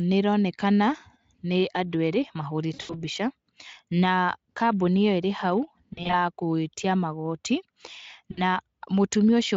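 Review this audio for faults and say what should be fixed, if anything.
VoIP packet loss concealed by the speech codec occurs at 2.73–3.03 s after "nĩ andũ erĩ", 5.93–6.15 s between "ĩrĩ hau" and "gwĩtia magooti", and 8.31–8.42 s. The decoder extrapolates from its last pitch and filter into a buzzy tone or coloured noise that fades, instead of leaving silence or clicks, as a plain dropout would. The faint Speex coding elsewhere is not the cause. Fix this with a larger jitter buffer, forward error correction or a more reliable network path.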